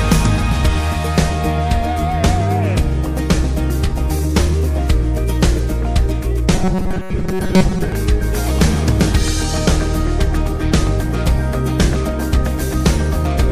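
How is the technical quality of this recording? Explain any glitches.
The recording has one clear glitch, a stretch of robotic sound from repeated short buffers between 6.54 and 7.92 s. The likely cause is new audio failing to arrive in time, so playback filled the gaps by looping a very short slice, about 5.3 ms, which fits the 188 Hz buzz, while the real audio was skipped. With around 70 percent of that stretch made of repeats, the sound turns into a rigid, metallic drone at 188 Hz that only loosely tracks the original.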